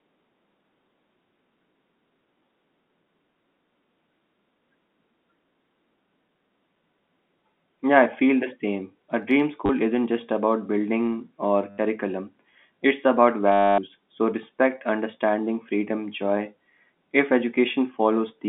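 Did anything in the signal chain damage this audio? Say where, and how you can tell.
Yes, at the network stage: packet loss with the last packet repeated. It hits just before "isn't just about building" at 9.66 to 9.69 s (30 ms), after "just about building or" at 11.7 to 11.78 s (80 ms), and after "it's about" at 13.52 to 13.78 s (260 ms). Each gap is filled with a looping copy of the previous packet. The 13.52 s run buzzes robotically at about 100 Hz, which fits 10 ms packets. Silence or a fade would mark a dropout or concealment instead.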